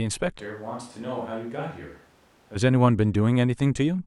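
At 0.41 s the speech suddenly turns roomy and hollow, drops about 10 dB with thinner bass, and room noise rises to around 25 dB under it, until a snap back at 2.55 s. That's likely a switch to a distant microphone after the close one dropped out.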